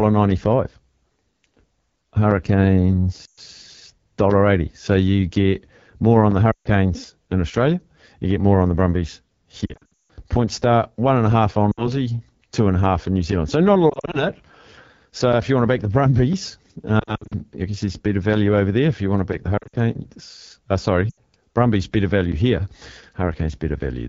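Throughout, the AMR wideband (HD Voice) codec at 8.85 kbit/s gives a rough, raspy edge, unlike a clean band limit, with noise-filled highs above 6.4 kHz. Lost AMR speech frames recur at 3.25, 6.51, 9.65 to 10.12, 11.72, 13.89 to 14.26, 16.99 to 17.33, 19.58 and 21.10 s. The decoder reuses the last sound's settings and fades it within two frames rather than cutting cleanly, so the longest gap, about 160 ms within the 9.65 to 10.12 s burst, decays to silence and the voice returns weak.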